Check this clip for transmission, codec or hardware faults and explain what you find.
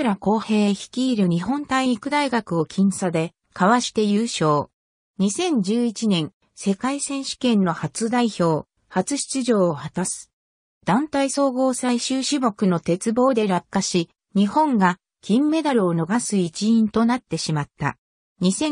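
One fault stands out: compressed frames skipped at 11.37 s. Around 20 ms of audio goes missing, most likely because frames were absent from the stream or the decoder rejected them as damaged, so playback jumps straight to the next good frame. On a spectrogram it shows as a thin vertical seam where the texture shifts abruptly; the waveform shows a discontinuity in its envelope.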